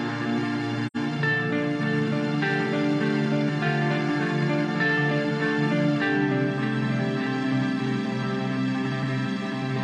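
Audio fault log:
0.86–0.97 s, AAC frame loss with muting: the sound drops out for roughly a tenth of a second and then returns. The gap length points to two lost AAC frames, about 85 ms of audio. The decoder replaced the missing spectrum with silence. Because AAC frames overlap, the neighbouring windows taper the sound down into the gap and back up after it. The hole therefore has soft edges rather than a hard cut.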